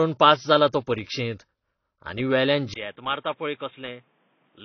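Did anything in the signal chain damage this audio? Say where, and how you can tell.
Yes. The speech sounds dull from start to finish, with nothing above 6.6 kHz, yet the file is a large, high-rate MP3. This is likely low-bitrate audio saved at a high bitrate, at the codec stage: the re-encode kept the first encoder's band limit and artefacts intact.

At 2.74 s there is a 20 ms gap. After it, the sound turns boxy and narrow, with nothing above 3.8 kHz, the level drops by about 10 dB, and a fresh noise floor appears roughly 35 dB down. The likely cause is an input switched to a poorer device, such as a headset call profile, at the driver level.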